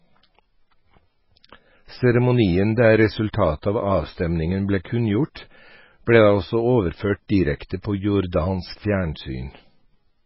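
From start to finish the speech has a hard ceiling, with nothing above 5.6 kHz, and a watery, swirling texture as weak frequency lines drop in and out from frame to frame. Attacks are smeared and s sounds turn metallic. That points to heavy MP3 compression, likely at a very low bitrate near 16 kbps, where the encoder cuts the treble and discards detail it judges inaudible. A plain low-pass filter would dull the top end just as sharply but would leave the remaining band steady rather than churning.

At 3.62 s, just before "av avstemningen ble", a short hiss of about 14 ms runs ahead of a sharp onset. At 5.35 s, right after the same phrase, a similar hiss of about 12 ms appears. Both are pre-echo. Each transform block spreads its quantisation noise evenly, so the noise sized for the loud attack also fills the quiet instant before it. Unlike reverb or an echo, which trail after a sound, this noise arrives before the attack it belongs to.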